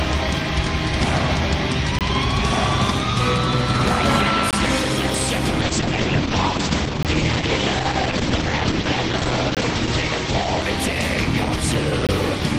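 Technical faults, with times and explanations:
1.99–2.01, 4.51–4.53, 7.03–7.05, 9.55–9.57 and 12.07–12.09 s, gap between chunks: Five 20 ms holes of silence cut into the sound, evenly spaced every 2.5 s. Nothing is lost. The audio simply stops briefly at each join between chunks.
5.63–12.36 s, call bitrate drop: The encoder was forced to spend far fewer bits. The sound turns coarse and muffled, which fits a fall from about 32 to 11 kbps. The top end is cut from 20 kHz to 8 kHz. The worst stretch lasts 4.3 s.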